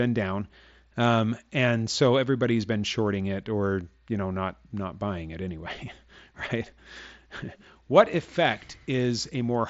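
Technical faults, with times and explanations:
Nothing to flag in this speech, which comes through a Bluetooth mSBC headset link that normally tops out near 7.7 kHz.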